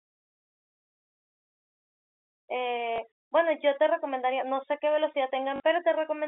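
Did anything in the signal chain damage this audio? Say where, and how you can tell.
Yes, in the network: packet loss with last packet repeated at 2.96–2.98 s and 5.56–5.60 s. The receiver replayed earlier audio, causing a brief blip lasting 20 ms and a robotic stutter lasting 40 ms.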